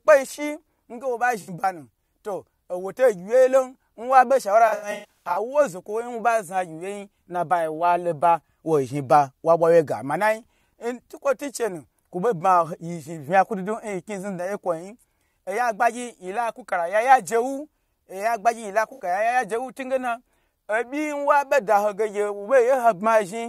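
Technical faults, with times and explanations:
1.41–1.49 s, AAC frame loss with concealment: a 64 ms smeared, noisy patch between "shi nge wo ɓa" and "ɓanu to", consistent with about three lost frames rebuilt from the last good spectrum.
4.68–5.37 s, AAC frame loss with concealment: about 405 ms of losses scattered over 683 ms after "lon nwa ɓe shaura". The longest gap is about 100 ms.
18.92–19.00 s, AAC frame loss with concealment: a 64 ms smeared, phasey patch where missing frames were refilled from the preceding spectrum.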